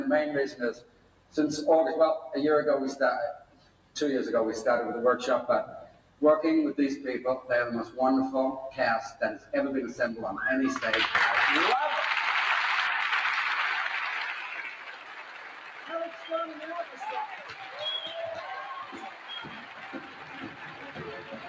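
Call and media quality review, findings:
Noise suppressor applied to music or sounds: level pumps and thins, with swings of around 15 dB as a speech-tuned suppressor treats sustained content as noise. The waveform envelope breathes and spectrogram tails erode.

Sound cut by the noise suppressor: drops of about 14 dB at 0.51–1.37, 3.37–3.96 and 5.84–6.21 s, about 11 dB at 9.38–9.53 s, and about 14 dB from 14.34 s to the end. Sustained tones sink while onsets pass. On the waveform the envelope collapses; on the spectrogram the harmonics dim. The call band stops at 8 kHz.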